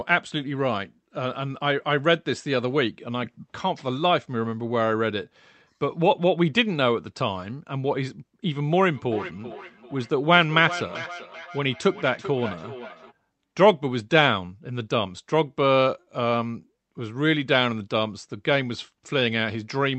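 From 8.94 s to 13.13 s there's feedback echo between two devices: two devices on the same call in one room, with one playing back what the other's microphone sent, which then gets picked up again. Each device's echo canceller only deals with its own playback, so this loop slips through. You hear the speech come back roughly every 400 ms, thinner and ringier, peaking at about 13 dB below the speech.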